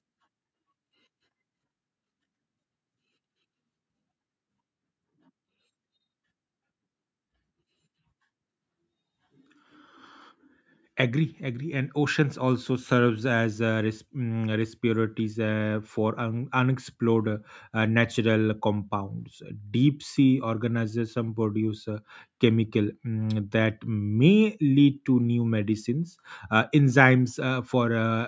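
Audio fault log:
No faults detected in this speech.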